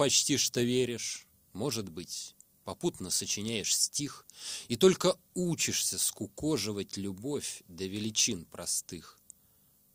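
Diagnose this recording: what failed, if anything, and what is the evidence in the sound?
Nothing in the recording stood out on listening as a sign that any stage in the chain had failed.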